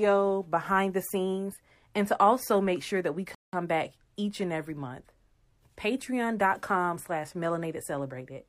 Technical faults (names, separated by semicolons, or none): rebuffering stall